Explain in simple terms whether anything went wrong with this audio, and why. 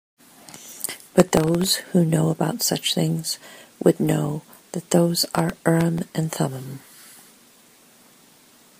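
Processor overload crackle at 1.20–1.69 s and 5.25–6.04 s: the computer missed its deadlines for very short buffers, replaying stale audio and causing gritty tearing.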